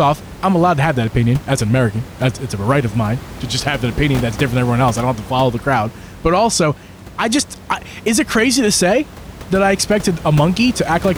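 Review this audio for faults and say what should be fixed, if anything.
Nothing to fix: the speech shows no system faults, and the room noise sitting about 16 dB below it belongs to the recording space rather than the signal chain.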